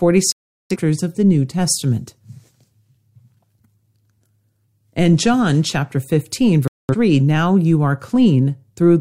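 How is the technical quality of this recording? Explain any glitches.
Two short holes in the speech let it down, both digital broadcast dropouts. From 0.32 to 0.76 s, right before "of the", and from 6.68 to 6.95 s, just ahead of "now you are", the receiver stopped getting good frames and muted. The sound drops to silence for about 0.44 s and 0.27 s, and whatever was said in those gaps is gone.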